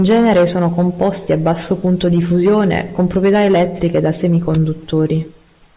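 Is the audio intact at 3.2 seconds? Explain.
Yes, the audio at 3.2 seconds is intact, with no audible fault at that moment.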